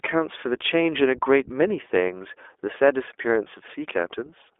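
From start to finish the speech carries iLBC codec damage. Nothing reaches above 3.8 kHz, and the sound sits in a telephone-line band of about 300 Hz to 3.5 kHz. Because each short frame is coded on its own, the excitation comes out plainly rough and slightly synthetic, a grain that fits 20 ms frames at around 15 kbps. Simple band-limiting would sound narrow but smooth. This graininess points to the codec.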